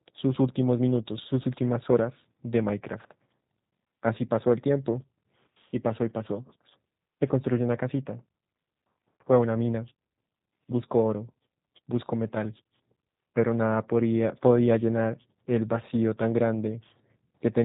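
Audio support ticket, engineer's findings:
G.729 codec damage on the speech, start to finish. Everything above about 3.8 kHz is gone, so it sounds muffled and phone-band, consistent with a narrowband VoIP leg. There's also a rough, slightly synthetic edge on the speech that's easy to hear. It comes from the encoder rebuilding each 10 ms frame from a filter model, a pitch guess and a few pulses, which fits the 8 kbit/s G.729A rate.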